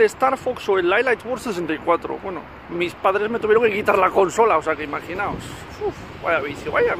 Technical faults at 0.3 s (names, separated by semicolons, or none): none